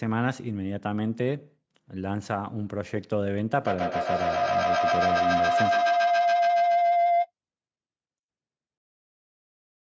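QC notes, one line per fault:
3.61–7.31 s, feedback howl: a tone around 700 Hz swells out of the speech, peaks about 5 dB above it, and pulses at about 150 ms intervals. Two devices on the same call in one room close a loop from loudspeaker back into microphone with more than unity gain, so each pass returns louder and narrows toward the frequency the loop favours, repeating at the loop delay until the loop is broken at 7.31 s.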